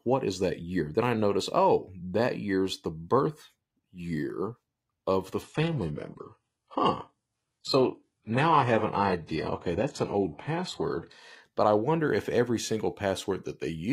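Right after "birth year of the", at about 5.42 s, the speech suddenly drops in quality for six seconds, until 11.42 s, just before "but i wonder if". That's an adaptive stream switching to a lower bitrate when the connection slowed. Nothing survives above 11.5 kHz, and the artefacts sound like a very low-rate HE-AAC version, somewhere around 12 kbit/s. There's no gap at either switch.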